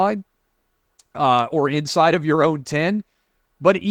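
No technical faults occur in this speech clip, so there is nothing to describe in time order.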